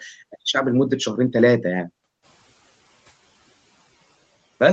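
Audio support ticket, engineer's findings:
Noise suppressor catching up, 2.22 to 2.5 s: background noise jumps about 13 dB near 2 s and passes under-reduced, then sinks about 10 dB over 280 ms. Spectrogram shows a brightened noise floor fading back; waveform shows a raised floor between speech.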